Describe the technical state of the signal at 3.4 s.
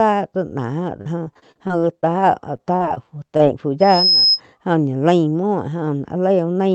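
At 3.4 s there is a short concealed packet loss, spanning 3.37 to 3.41 s. About 20 ms of the speech failed to arrive in time. The receiver filled the gap by extending the preceding sound, then crossfaded back into the real signal. It comes through as a brief smear or wobble, and a quick consonant may drop out. Around it, the call codec limits the band near 8 kHz.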